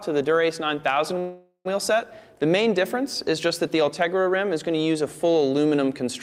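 A call audio freeze runs from 1.19 s to 1.67 s. The sound stops advancing and the last fragment is stretched into a fading buzz or hiss, ending in about 100 ms of silence. The likely cause is delayed packets draining the jitter buffer, so the receiver filled 457 ms with concealment. When playback resumes it picks up where it halted. Nothing is lost, but everything after 1.67 s arrives roughly 0.46 s late.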